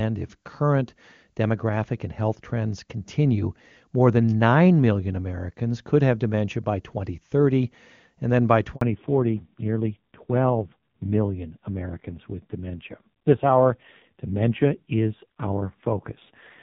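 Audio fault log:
8.75 to 8.81 s, handover gap: right after "then by" the sound drops out for about 60 ms while the call switches networks and no frames come through.
8.81 s to the end, fallback to narrowband: the call falls from HD Voice at 23.85 kbit/s to a 5.9 kbit/s narrowband codec, so nothing above 4 kHz survives and speech turns dull and rough.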